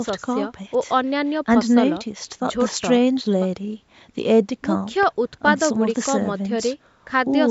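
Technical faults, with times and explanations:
Nothing here counts as a technical fault; the speech has simply passed through a call's microphone processing, which trims the lowest bass and leaves nothing above 8 kHz, just as that kind of processing normally does.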